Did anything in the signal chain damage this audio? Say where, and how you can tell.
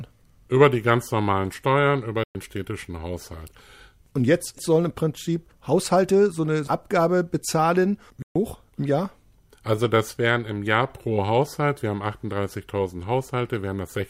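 Yes. The speech cuts abruptly to silence at 2.24–2.35 s and 8.22–8.36 s, then resumes as if it had played on: likely a Bluetooth dropout, with packets lost over the wireless link.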